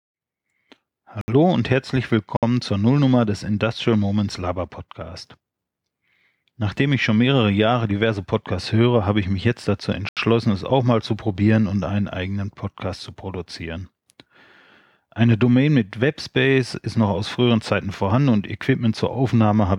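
Short holes break the speech at 1.21–1.28 s, 2.37–2.43 s and 10.09–10.17 s (67, 60 and 80 ms). Each is a block of digital silence: samples were replaced by zeros, with no fade in or out.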